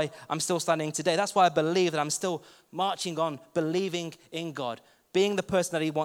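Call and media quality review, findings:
Nothing to flag on this speech recording; no faults turned up anywhere in it.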